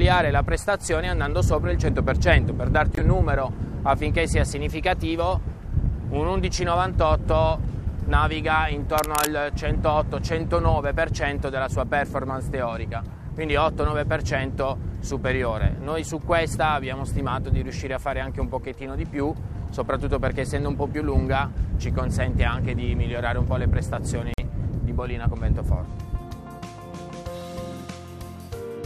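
Corrupt frame muting cuts the audio at 2.95 to 3.02 s and again at 24.34 to 24.40 s. Each time the sound drops abruptly to silence for about 60 ms, a gap that points to roughly three consecutive compressed frames. Their data was damaged, the decoder refused them, and the player substituted silence of the same length, so the timing afterward stays in step. Cable scratch noise appears from 8.97 to 9.27 s as a dense, uneven burst of scratching and rustling, only a little quieter than the audio it sits over. It likely comes from a worn cable, connector or control being moved, its contact resistance fluctuating rapidly and injecting those irregular noise bursts into the signal for about 0.3 s.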